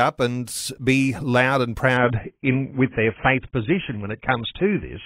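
From 1.97 s to the end, the speech abruptly turns dull and watery, with nothing above about 3.8 kHz and codec artefacts rising, yet there is no gap or dropout at the switch. This is an adaptive stream at a lower bitrate: the player swapped mid-stream to a much leaner encoding of the same AAC audio, which fits a fall from around 96 kbit/s to about 16 kbit/s, discarding treble and detail to save data.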